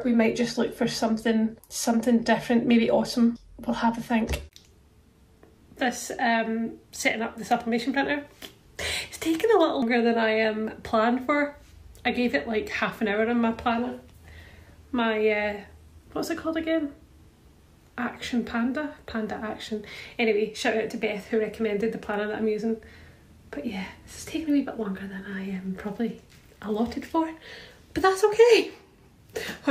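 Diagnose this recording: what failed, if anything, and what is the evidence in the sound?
The codec stage failed, with compressed frames skipped. At 9.82 s the sound jumps ahead, losing about a fifth of a second. That fits two 93 ms frames going unplayed.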